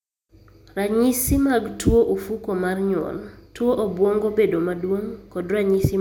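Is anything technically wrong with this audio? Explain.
No, nothing technically wrong can be heard here.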